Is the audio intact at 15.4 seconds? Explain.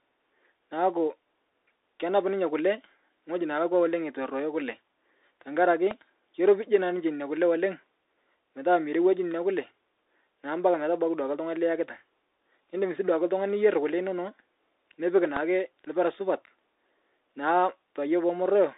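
No. A loud pop, a single sharp click about 20 dB above the speech, strikes from 15.37 to 15.39 s, just before "lpira supat". A sudden voltage step, likely from a plug, switch or driver glitch, was added on top, and the speech continues beneath it. On a waveform it is a tall narrow spike, and on a spectrogram a thin vertical stripe.

The speech at that moment is also carried through the Bluetooth CVSD headset codec, which encodes one up-or-down bit per sample at 64 kHz with an adapting step size. Nothing above 3.8 kHz survives, and the codec's damage is plainly audible as scratchy sibilants and a granular hiss. A spectrogram shows a hard ceiling with empty space above.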